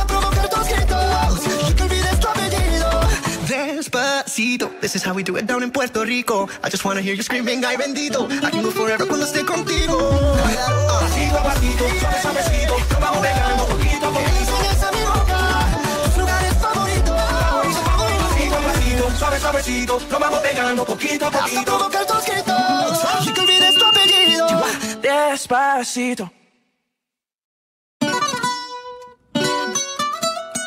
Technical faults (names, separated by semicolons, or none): loudspeaker feedback squeal